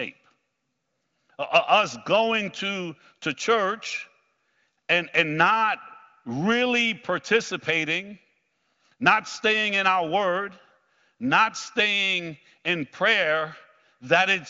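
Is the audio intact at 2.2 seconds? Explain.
Yes, the audio is intact at 2.2 seconds, with the speech carried cleanly through the AMR wideband (HD Voice) codec at 23.05 kbit/s.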